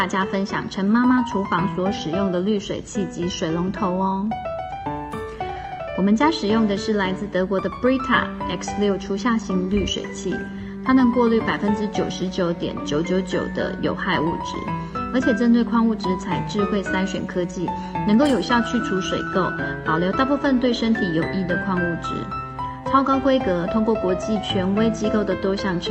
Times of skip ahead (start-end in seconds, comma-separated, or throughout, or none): none